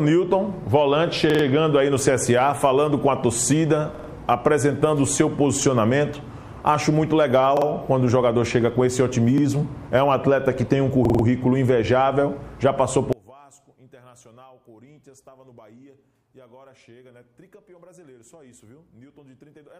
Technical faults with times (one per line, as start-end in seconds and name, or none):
1.30-1.44 repeated buffer
3.95-4.09 repeated buffer
7.57-7.66 repeated buffer
9.38-9.43 repeated buffer
11.05-11.24 repeated buffer
13.13-19.79 one channel inverted